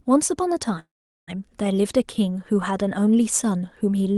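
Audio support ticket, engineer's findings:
Call audio freeze, 0.79–1.30 s. Sound stalls, brief fading fill, then about 0.41 s of silence. Resumes where it stopped, nothing lost, playback now about 0.48 s late. Likely delayed packets draining the jitter buffer. Top end near 12 kHz, consistent with Opus.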